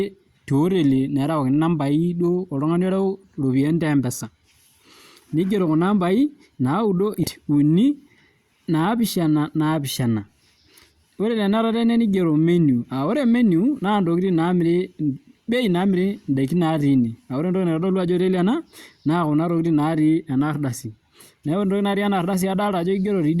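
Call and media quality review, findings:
Abrupt forward jump in the speech at 7.23–7.28 s: a short blip at the join, then the talk resumes further on with content missing and no fade. Likely cause: stream segment skipped. The player failed to fetch one segment and continued with the next, dropping that stretch of programme.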